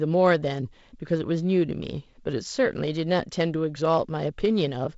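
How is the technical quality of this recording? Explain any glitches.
No glitches heard here.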